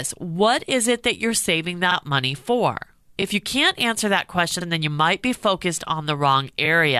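Repeated frames at 1.91, 3.21, 4.60 and 6.64 s replay 46, 23, 46 and 23 ms of speech as short stutters. Waveform and spectrogram show a duplicated slice with a seam.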